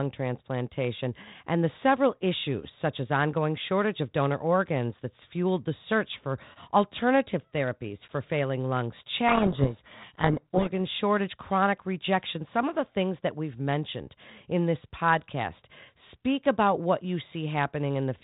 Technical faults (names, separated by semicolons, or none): codec payload misread